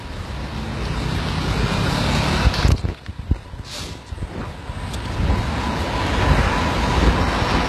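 From start to finish the treble has a gritty, metallic sheen, and nothing at all comes through above 12.3 kHz. The damage is plainly audible: upper detail sounds bright but synthetic, as if laid over the lower band rather than belonging to it. This is likely HE-AAC compression at a very low bitrate, roughly 16 kbps. Only the lower spectrum is coded, and the top is rebuilt by copying lower bands upward, so the high harmonics don't line up with the original.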